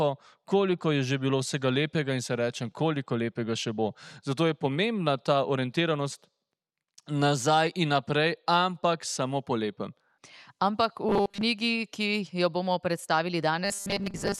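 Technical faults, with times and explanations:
11.09–11.43 s and 13.65–14.40 s, robotic sound from repeated short buffers: the sound turns into a rigid, metallic buzz fixed at 200 Hz. This is likely new audio arriving too seldom, so a 5 ms stretch is looped over most of each span while the real audio is skipped.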